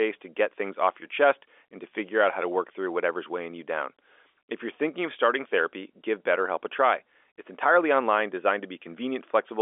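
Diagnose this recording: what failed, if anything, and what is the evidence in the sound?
Nothing failed, and the sound gives no evidence of any fault along its telephone line path.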